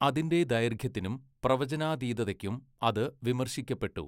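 No technical faults turn up anywhere in this speech recording, which comes through intact without any dropouts, clicks or interruptions.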